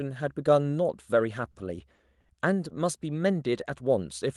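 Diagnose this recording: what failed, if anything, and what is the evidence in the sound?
The network and jitter buffer are at fault: three short stalls from late packets, at about 1.51, 1.95 and 2.20 s. Each time the buffer ran dry, and the last sound was held for roughly 40, 30 and 40 ms before the speech picked up where it left off. Nothing's lost, but each hold pushes everything after it later.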